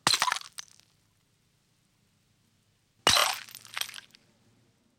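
A short run of compressed frames was played again at 3.18 to 3.23 s, consistent with two 16 ms frames repeated twice, adding about 52 ms as a brief stutter.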